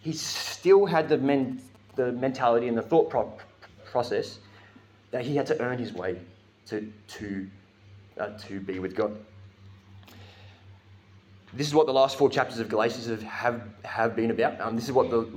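From 0.97 to 2.00 s a galloping run of ticks and short buzzes sits roughly 25 dB below the sound. These are GSM signalling bursts: a nearby 2G phone transmitting bursts repeating at 216.7 Hz, which the audio circuit rectifies into that clipped buzz.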